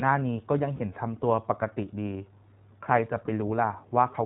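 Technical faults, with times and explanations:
Throughout: iLBC codec. The speech is band-limited to narrowband, with nothing above 4 kHz, so it sounds dull and telephone-like. The codec damage is plainly audible as a rough, slightly synthetic texture, because each short frame's excitation is coded on its own rather than built from the previous one. The character fits iLBC at 15.2 kbps with 20 ms frames.
0.76–0.81 s and 3.26–3.30 s: lost iLBC frames. In each gap the decoder fills the missing audio by repeating the last pitch cycle blended with noise, so the sound briefly turns into a held, faintly buzzy or breathy vowel. The first gap lasts about 40 ms and the second about 20 ms, which fits two lost 20 ms frames and one. Because iLBC frames decode independently, the speech is clean again straight after each gap.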